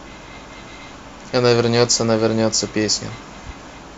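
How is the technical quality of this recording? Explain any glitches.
No glitches to report here; the speech comes through without any dropouts, clicks, stutters or other technical hiccups worth pointing out.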